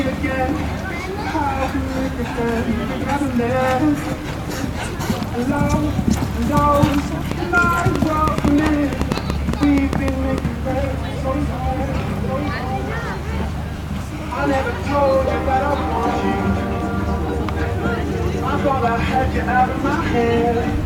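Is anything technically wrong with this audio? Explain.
Yes. From 7.32 to 10.39 s there is a train of clicks. About twenty similar pulses arrive at roughly 5.5 per second, unevenly spaced. They sit around 15 dB above the sound. Likely cause: nearby equipment interference or a faulty connection or power supply. They are heard as popping ticks.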